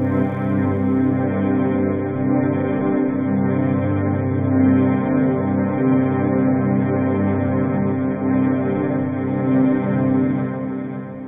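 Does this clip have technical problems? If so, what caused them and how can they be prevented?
Yes. From 1.25 to 9.25 s an adaptive stream dropped to a lower bitrate, abruptly cutting everything above 3.6 kHz and thickening codec artefacts, which points to a 24 kbit/s rendition. A larger playback buffer or a higher minimum bitrate would prevent it.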